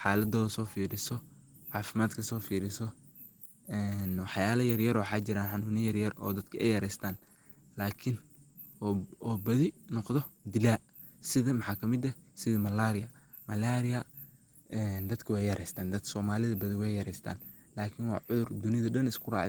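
Opus voice compression runs through the whole clip, and the damage is plainly audible. The sound suggests hybrid coding: speech modelled by linear prediction below 8 kHz, a coarse transform layer above. The rough detail fits a low bitrate near 16 kbps.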